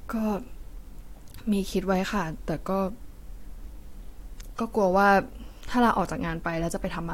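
No technical faults can be heard anywhere in this speech recording. There is nothing in it to locate in time or to explain.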